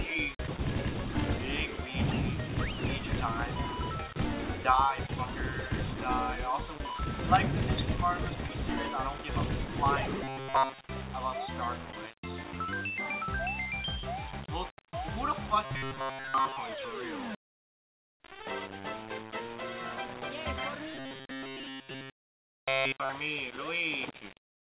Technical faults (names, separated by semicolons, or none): low bit depth without dither; sound dropped by the voice detector; robotic sound from repeated short buffers; comfort noise in place of the background